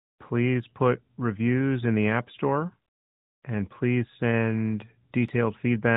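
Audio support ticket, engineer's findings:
No faults found in the speech audio.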